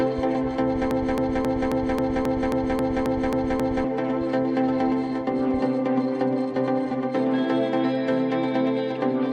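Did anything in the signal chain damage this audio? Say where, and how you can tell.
Yes. The playback buffer likely stalled and resent its last fragment, a broken-record loop: one 0.27 s piece repeats 11 times from 0.91 to 3.84 s.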